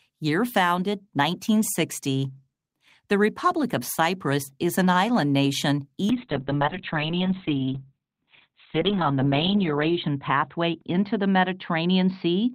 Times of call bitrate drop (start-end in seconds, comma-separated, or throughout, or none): 6.10-12.55